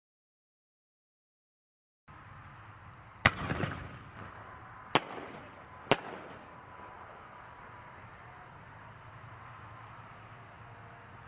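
No technical faults can be heard anywhere in this audio. There is nothing here to place in time or describe further.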